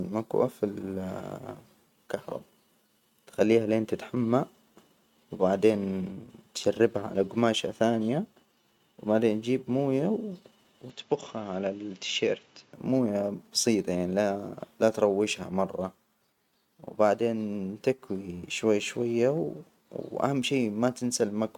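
From 10.9 s, just before "مويه بسيطة يعني", to 12.73 s the speech turns duller and slightly quieter, with nothing above 7.6 kHz and a faint new background noise, then clears. The input likely switched to a poorer device. The added noise and level drop rule out a low-pass filter.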